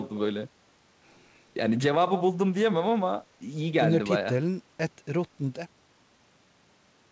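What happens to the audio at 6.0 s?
At 6.0 s the speech carries on intact, with no dropout, glitch or distortion.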